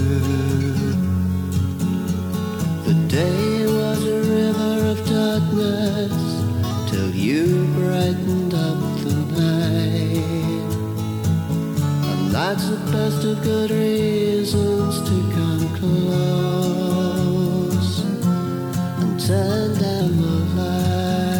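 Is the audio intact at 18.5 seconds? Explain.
No. A wrong sample rate fault runs from 18.04 to 20.01 s: playback about 1.09 times too fast, consistent with 44.1 kHz audio played at 48 kHz, raising pitch 1.47 semitones and hurrying the sound.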